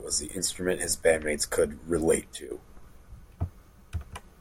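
A sudden gain jump at 2.34 s, just after "his bandmates could relate", drops speech and background together by about 10 dB until 2.51 s, likely from gain applied without a ramp.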